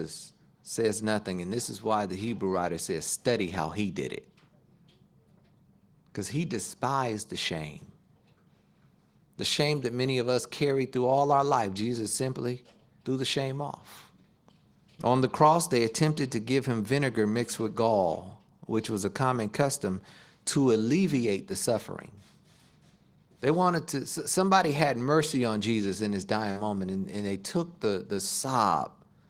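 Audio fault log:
26.51 to 26.59 s: short concealed packet loss. About 40 ms of speech arrived too late to decode. The receiver filled the gap by extending the preceding sound, then faded back into real audio. This leaves a brief smear where a short consonant may vanish.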